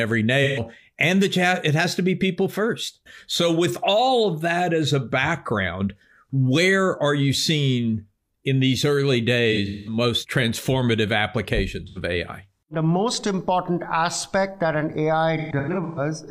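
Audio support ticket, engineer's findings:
AAC frame loss with concealment at 0.44–0.60 s, 9.52–9.97 s after "seeing in these early", 11.87–11.98 s, and 15.37–16.0 s after "important aspect that an". The decoder papers over the gaps with smeared, phasey fill. The second and fourth are scattered, with runs up to about 0.2 s.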